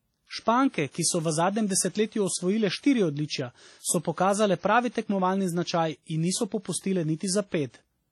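The speech rings and smears throughout with breathing hiss, likely from heavy WMA compression at around 32 kbps; a spectrogram shows patchy gaps, empty above 19.5 kHz.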